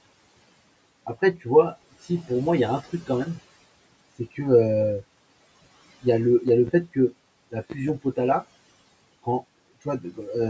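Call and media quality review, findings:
Loud pop, two events, each a quick double pop: 6.48–6.70 s and 7.70–7.91 s. Peaks about 10 dB over the speech, which carries on underneath. Likely a sudden voltage step (loose plug, switch, static discharge or driver glitch) that the downstream circuitry shapes into a short pulse. Same double-pop shape both times, about 1.2 s apart, so I'd check the mic connection and capture driver first.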